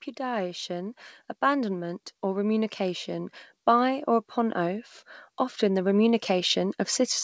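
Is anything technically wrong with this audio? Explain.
Yes. Automatic gain rising occurs from 0.17 to 4.89 s, lifting the level by about 7 dB, and again from 5.59 s to the end. The gain control judged the input too quiet and raised it gradually, so speech and background swell together.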